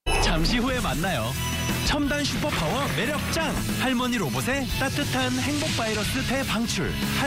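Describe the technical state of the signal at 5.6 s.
At 5.6 s the signal is intact, with no audible fault at that moment.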